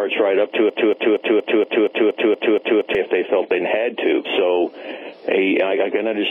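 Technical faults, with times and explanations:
0.70 to 2.95 s, broken-record loop: a fragment about 235 ms long plays back to back, identical each time, for ten repetitions, giving a stuttering, mechanical repeat in place of the audio that should have continued. The cause is likely a stall in the player, encoder or stream, which kept resending the last buffered fragment until data resumed. Whatever belonged in those two and a quarter seconds is lost.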